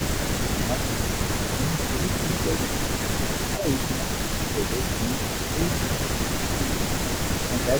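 From the very start and right through to the end there's an echo leak: a faint delayed copy of the speech trailing about 266 ms behind, sitting roughly 15 dB under the main voice. It most likely comes from a far end on loudspeaker whose echo canceller didn't fully scrub what its mic picked up, so that residue got sent back and shows up as a ghost behind the speech.

Layered on that, the speech suppressed in double talk shows up as repeated dips in the main voice, at 0.36 to 0.98 s, 1.41 to 2.48 s, 3.26 to 5.76 s, 6.31 to 6.85 s and 7.48 to 7.7 s. Each drops by up to around 10 dB, and the longest, in the middle, is pulled down for a good second and a half in patches. The likely cause is the canceller failing to separate the talker from the echo and ducking both together.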